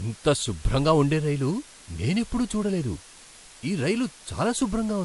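From start to finish the speech carries a constant, even hiss with no grinding or distortion, the signature of low bit depth with dither. Random dither added before coarse rounding turns the error into steady white noise, roughly 20 dB below the speech, which fits about 7-bit resolution.

Throughout, the top end stops sharply at 11.3 kHz, and two different flavours of coding artefact are heard together, the first codec's artefacts layered over the second codec's own. This is likely transcoding between lossy codecs: the sound points to a 48 kbit/s MP3 later re-encoded to 96 kbit/s WMA. The second encoder spent bits on the first one's damage, and the first one's cut-off remained.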